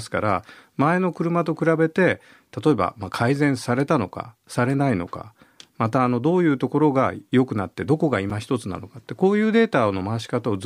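Speech recording with one fault: a block of digital silence at 8.30 s, a 5.3 ms dropout heard as a tick or dip, consistent with a missed 256-sample buffer.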